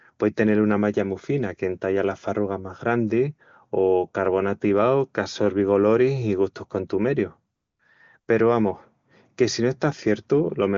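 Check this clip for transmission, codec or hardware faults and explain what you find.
AMR comfort noise appears twice, from 7.55 to 7.79 s and from 8.19 to 8.27 s: the background turns into a smooth, steady hiss. The phone judged those moments silent, sent no speech frames, and the receiver filled the gaps with synthetic noise.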